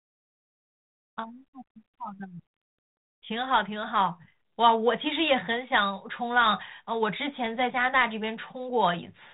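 No faults found: the speech carries the light coding texture of a 32 kbit/s G.726 ADPCM link, with nothing above 4 kHz, which is normal for that path.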